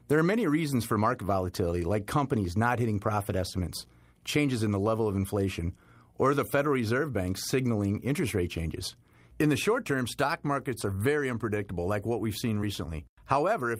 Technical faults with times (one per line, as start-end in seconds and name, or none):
none